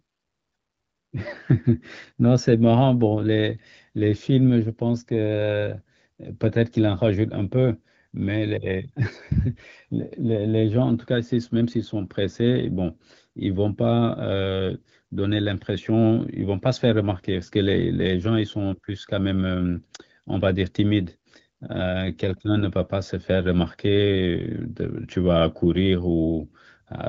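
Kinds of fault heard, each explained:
No faults can be heard in this speech recording.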